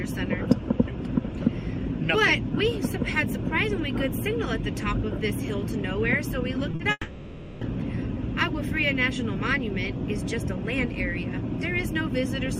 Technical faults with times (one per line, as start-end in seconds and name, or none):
6.71-6.81 short concealed packet loss
6.91-7.63 long network dropout